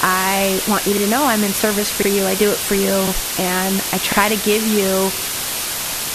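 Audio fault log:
Throughout: low bit depth with dither. The speech sits under a constant, even hiss, roughly as loud as the speech itself. The level sounds rounded to about 4 bits, with dither noise added before rounding. Dither turns the rounding error into steady white noise. So there is no crunchy distortion, just hiss that never changes with the signal. It stays the same through loud and quiet parts alike.
0.97 to 5.22 s: overlapping chunks. Five stutters land at 0.97, 2.02, 3.07, 4.12 and 5.17 s. Each one sits just after "I want you", "I'm in service for" and "to give you" at the first, second and fifth. About 50 ms of audio plays twice at each join. The chunks are about 1 s long, and each new one starts before the last ended. The repeat sounds like a short click or hiccup at a steady beat.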